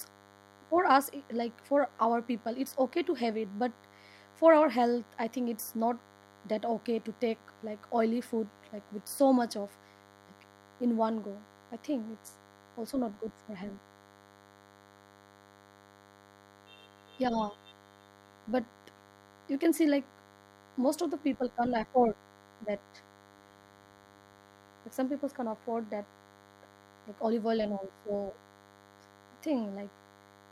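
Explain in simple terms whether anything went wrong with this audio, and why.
DECT cordless phone buzz runs through the whole speech clip, from start to finish. A nearby cordless phone or its base station sends a short radio burst 100 times a second. The recording circuit picks this up, turning it into a faint, thin, steady buzz under the speech.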